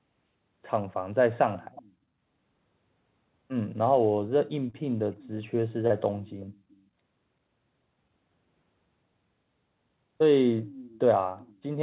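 Echo leak at 1.54–1.93 s: a faint copy of the speech returns about 0.36 s late, around 20 dB down, likely from a far-end loudspeaker its echo canceller failed to fully remove. Short concealed packet loss at 4.70–4.76 s and 5.87–5.93 s: about 30 ms went missing each time, and the receiver filled the gap by extending the preceding sound, leaving a brief smear. The echo leak returns at 6.27–6.82 s, 10.6–11.0 s and 11.39–11.58 s, each time about 0.38 s behind, at roughly 25, 20 and 30 dB below the speech.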